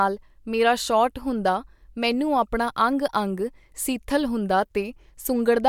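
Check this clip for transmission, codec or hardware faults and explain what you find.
No faults detected in this speech.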